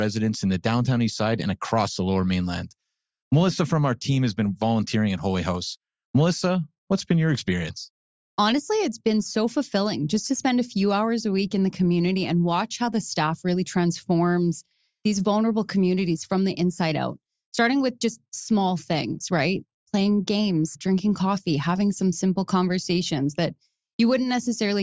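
No technical faults are audible anywhere in the speech recording.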